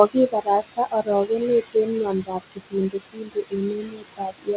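Noise suppressor artifacts run through the whole clip. The suppressor pulls the room noise down about 21 dB between words, so the background dips in pauses and returns under the speech.

Speech cut by the noise suppressor follows. From 0.32 to 1.09 s, roughly 300 ms of speech drops by up to about 21 dB. From 1.62 to 1.9 s, a briefer stretch of about a tenth of a second drops by the same amount. From 2.12 s to the end, speech falls by up to about 22 dB. In each stretch the suppressor mistakes quiet speech for noise, and those parts sound swallowed and faint.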